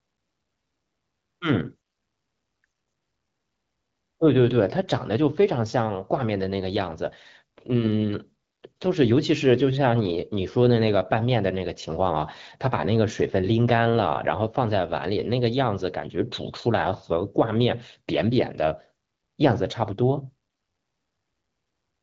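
No technical faults can be heard in this speech recording. It is carried over the AMR wideband (HD Voice) codec at 12.65 kbit/s, which leaves the speech clear, with only the light coding character expected at that rate, including the noise-filled band above 6.4 kHz.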